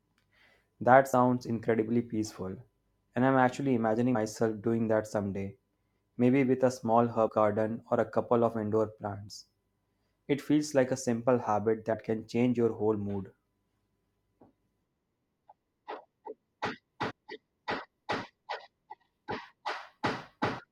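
Compressed frames skipped occur at 1.12 s, 4.14 s, 7.27 to 7.29 s, 11.92 s and 17.09 to 17.12 s in this speech clip. Each time, the decoder lost whole frames, so the speech jumps forward by roughly 70 ms before "incredibly peaceful" and between "I'm actually" and "doing that someday maybe", similarly at 7.27 s, about 50 ms between "like a simple habit" and "can change your whole", and about 100 ms at 17.09 s.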